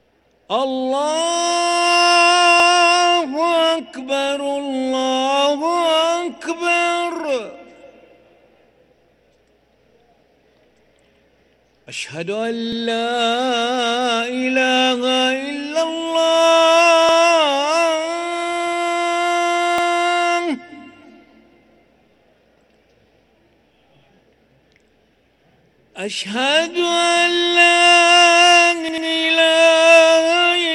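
Repeated buffers occur at 2.60, 11.15, 12.73, 17.09 and 19.78 s, and again from 28.89 to 29.07 s. Each time fresh audio failed to reach the output before its deadline, so the device replayed the block it had just played. Each block lasts about 93 ms, which fits a 4096-sample buffer. The result is a brief stutter: the same slice sounds twice with a hard seam at the join, and three times in the last event, while nothing is skipped.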